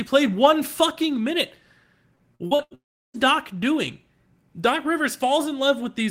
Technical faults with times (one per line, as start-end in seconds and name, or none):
2.15-2.74 repeated packet loss (robotic sound)
2.75-3.17 long network dropout